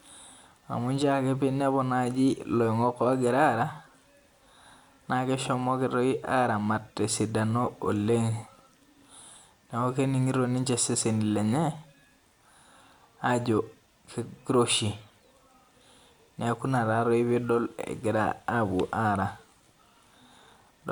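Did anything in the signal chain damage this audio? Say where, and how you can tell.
No, nothing along the chain seems to have harmed this speech recording, and there's no point where the signal falters or picks up anything it shouldn't.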